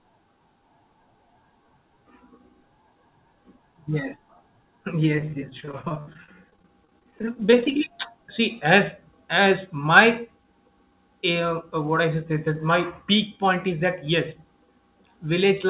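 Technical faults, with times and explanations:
5.17–7.72 s, repeated packet loss (robotic sound): dozens of short dropouts, none longer than about 30 ms, each patched by extending the preceding audio. About a fifth of the stretch is concealed, giving choppy speech until "see as", over the 4 kHz-limited narrowband call path.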